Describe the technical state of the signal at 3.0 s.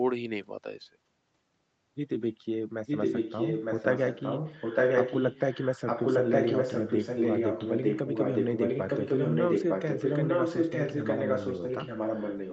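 At 3.0 s an echo leak is under way, running from 2.86 s to the end. A second copy of the speech arrives about 0.91 s late at roughly the same level, likely from a loudspeaker whose echo canceller let it through. Unlike reverberation, it is a distinct repeat, not a smeared tail.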